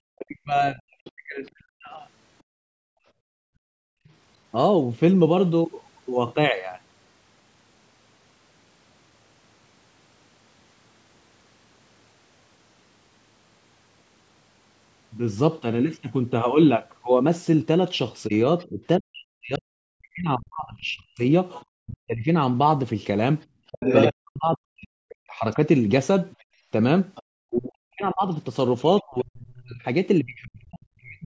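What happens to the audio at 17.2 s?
Nothing goes wrong at 17.2 s; the speech continues intact through that moment, with only the usual trimmed low bass and the absence of content above 8 kHz from the call's microphone processing.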